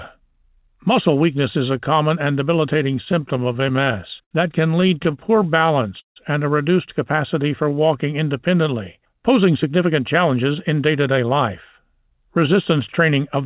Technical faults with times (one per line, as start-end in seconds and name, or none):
2.96-4.33 repeated stalls (stutter)
4.81-5.62 repeated stalls (stutter)
5.51-5.90 jitter buffer slow-down
6.00-6.18 call audio freeze
7.42-7.87 jitter buffer slow-down
9.66-11.32 jitter buffer speed-up
11.91-13.45 jitter buffer speed-up